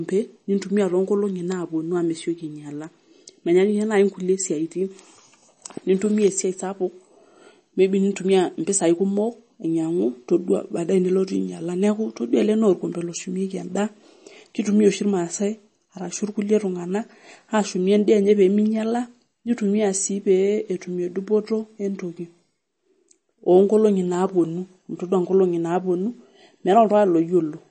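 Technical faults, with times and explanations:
Throughout, MP3 compression: nothing reaches above about 8.4 kHz, and that fixed treble ceiling combines with plainly audible watery, swirling artefacts as weak frequency lines drop in and out from frame to frame, with s sounds turning metallic and chirpy. This is likely a bit-starved MP3 encode, which fits a low bitrate near 32 kbps. The swirl separates it from a simple low-pass filter, which would dull the sound without that unsteady, bubbling texture.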